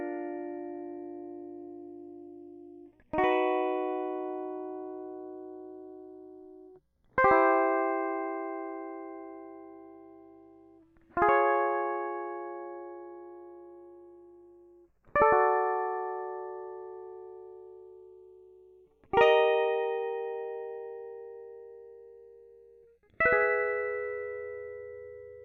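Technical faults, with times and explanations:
Throughout, channels drifting apart: clocks roughly 40 ppm apart slide the delay toward half a millisecond; in mono, slow flanging, notches drifting across the spectrogram.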